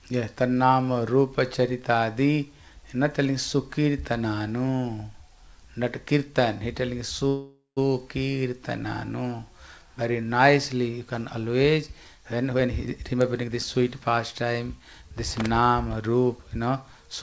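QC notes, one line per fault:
7.28–7.79 s, call audio freeze: the sound carries on as a fading buzz-like continuation of the last moment, ending in 140 ms of silence, then resumes where it stopped. Likely cause: the jitter buffer ran empty while packets were held up. This inserted 487 ms with nothing lost and made the delay longer.
12.52–16.67 s, jitter buffer speed-up: the audio plays at 112% speed with unchanged pitch and sounds hurried. The receiver repeatedly cut out short pitch-period-sized pieces to drain an overfilled buffer, removing about half a second in total and reducing the delay.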